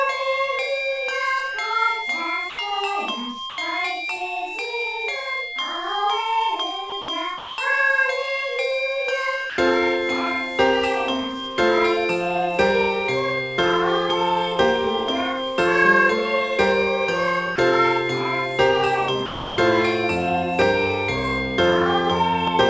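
The sender's voice detector likely misjudged parts of this audio as background and stopped sending them, so comfort noise fills brief gaps at 2.50, 3.50, 6.90, 7.02, 7.38, 9.50, 17.56 and 19.26 s. Most gaps last 20 to 80 ms, but the one at 7.38 s lasts 200 ms and the one at 19.26 s lasts 320 ms, and the sound drops out under steady hiss until it resumes. A loud pop, probably from a voltage step or glitch entering the signal chain, lands at 20.62 s, about 15 dB above the sound. A double pop follows between 22.48 and 22.63 s, about 10 dB above it, and the sound carries on beneath each thump.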